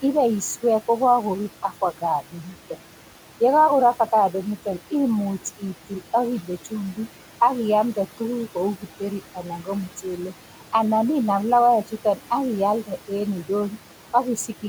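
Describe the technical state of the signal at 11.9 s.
At 11.9 s, as throughout the clip, noise suppressor artifacts are present: the suppressor pulls steady-noise bands down by about 12 dB, so the room noise, sitting about 18 dB below the speech, dips between words and rises beneath them.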